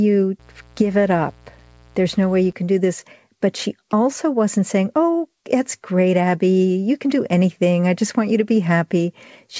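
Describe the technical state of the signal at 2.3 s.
A steady, raspy buzz sits under the speech at 2.3 s, part of a stretch of mains buzz running from about 0.39 s to 2.53 s, well below the speech in level. It comes from 60 Hz mains interference. Sharp switching spikes from something like a dimmer, rectifier or unshielded cable arrive twice per cycle, so the hum carries a dense ladder of 60 Hz harmonics climbing into the kilohertz range. This gives it its edge, with nothing passing above the 8 kHz ceiling of the call's wideband codec.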